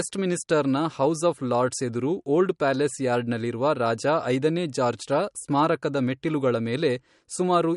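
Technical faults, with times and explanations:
Throughout, MP3 compression. Nothing is present above 11.2 kHz, so the speech lacks its top-end air. The coding damage is plainly audible as a watery, swirling texture. This is likely a starved MP3 encoder, which fits a bitrate around 48 kbps. With too few bits, it cuts the treble at a fixed frequency. It also drops weak frequency lines, which switch on and off between frames and cause the swirl.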